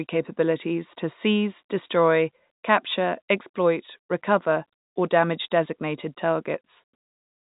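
Nothing stood out on listening to this speech, which comes through the narrow band of G.711 telephone coding with no energy above about 3.8 kHz.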